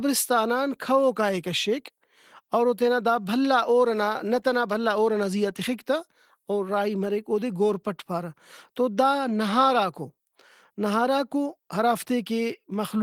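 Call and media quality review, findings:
No faults found; speech runs through Opus voice compression in hybrid mode at 20 kbps, fullband, with content extending to about 20.2 kHz.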